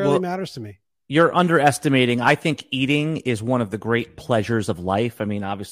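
No technical faults detected.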